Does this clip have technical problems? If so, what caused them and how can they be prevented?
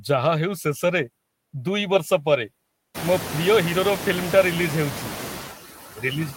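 Yes. Noise suppressor artifacts run throughout. The suppressor cuts bands it judges to be steady noise by about 13 dB, frame by frame, so background noise sinks between words and swells beneath them. This is more exposed once the room noise climbs about 23 dB around 3 s. Prevent it by using gentler suppression settings and placing the microphone closer to the talker.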